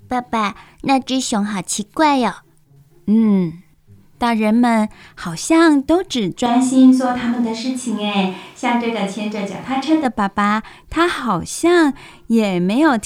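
From 6.46 to 10.05 s the speech abruptly turns roomy, hollow and thin, at much the same level, then snaps back. That's likely a switch to a distant microphone.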